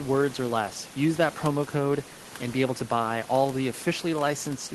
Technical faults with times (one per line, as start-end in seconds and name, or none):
none